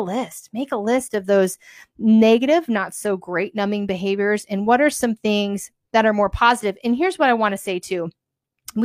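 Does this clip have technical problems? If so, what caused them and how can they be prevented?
No, there are no technical problems in this clip.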